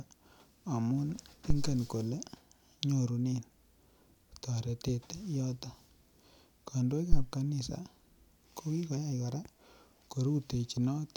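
Two phantom power thumps interrupt the speech. The first, from 1.50 to 1.85 s, peaks at about -17 dBFS and dies away over 79 ms. The second, from 7.12 to 7.26 s, is louder, at about -12 dBFS, and decays within 30 ms. Each is a deep low thud. A supply switching on the live input sends a voltage step through the coupling capacitors.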